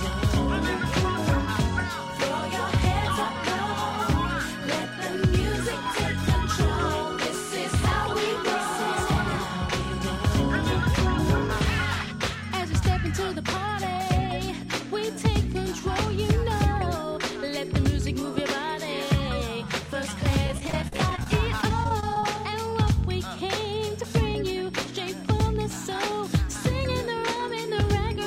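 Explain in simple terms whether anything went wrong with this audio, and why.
Two loud pops, at 7.92–7.94 s and 18.38–18.40 s, jump out above the sound, which carries on underneath. Each is a single sharp hit, likely from a plug, switch or static, not a dropout.

Repeated packet loss (robotic sound) makes the audio choppy from 20.47 to 21.27 s and again from 21.62 to 22.24 s. Tiny pieces keep going missing and are patched over, unlike a pop's single burst.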